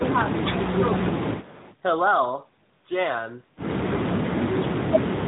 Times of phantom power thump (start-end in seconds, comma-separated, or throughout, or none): none